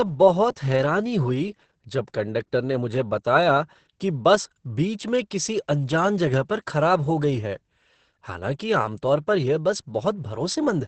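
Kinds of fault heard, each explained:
Opus voice compression: Opus's SILK coder ran at a starved rate, which fits about 10 kbps, leaving the speech muffled, hoarse, robotic and empty above 8.7 kHz.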